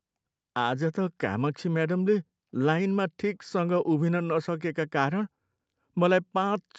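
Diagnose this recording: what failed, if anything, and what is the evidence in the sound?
Nothing has failed: the speech shows the ordinary character of a call's microphone processing and WebRTC path, with content ending at 8 kHz, which fits the bandwidth setting of an Opus call codec, and no stage in the chain stands out as having gone wrong.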